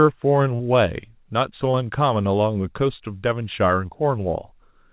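At 0.56 to 0.61 s and again at 1.71 to 1.75 s, short concealed packet loss leaves a brief smear where the receiver stretched the previous sound over the missing audio. It differs from a plain dropout because no silence is heard. The band stops near 4 kHz, which fits a G.711 call codec.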